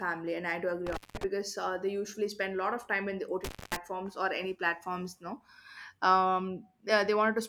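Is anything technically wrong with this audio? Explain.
Yes, there's an intermittent contact problem, twice in this speech clip: between 0.87 and 1.24 s, with the signal open for about 180 ms, and between 3.44 and 3.76 s, open for about 230 ms. It sounds like a loose plug or cable briefly losing connection. The audio drops out abruptly, you get crackle as the contact breaks and remakes, and faint hiss is left during each gap.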